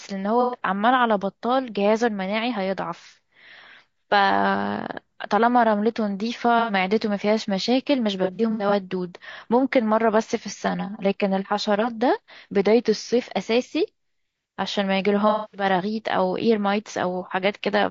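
Low-delay AAC compression is the likely cause of the rough, grainy quality throughout this speech, with noise between harmonics and a thin upper band, which fits AAC-ELD at around 32 kbps. AAC frame loss with concealment follows at 0.41 to 0.56 s, 6.59 to 6.73 s, 8.24 to 8.73 s (scattered, with runs up to about a tenth of a second), and 15.29 to 15.64 s. The decoder patched lost frames from earlier spectrum, leaving smeared, noisy patches. At 10.68 to 11.90 s a channel delay (comb filtering) appears: one channel lags by about 5 ms before mixing to mono, cutting notches from about 100 Hz upward and making the sound hollow. From 12.62 to 13.18 s a drift correction step is likely, slowing playback 5.5% so the pitch drops nearly a semitone, 98 cents.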